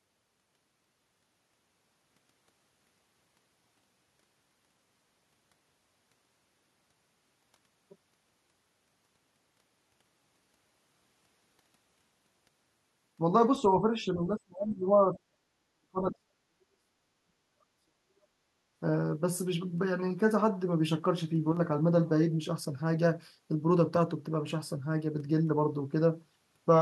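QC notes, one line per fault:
13.59–18.39 s, speech suppressed in double talk: the voice repeatedly dips, dulls and breaks off for about four seconds in total, falling by as much as 40 dB. This is likely an echo canceller clamping down while both ends talked. The spectrogram shows gaps and thinned upper bands.
21.52–21.57 s, one channel drops out: for 50 ms the level falls abruptly by about 6 dB and then recovers. This is likely one stereo side vanishing before the mono sum. The waveform shows a short, flat-sided step down in the envelope.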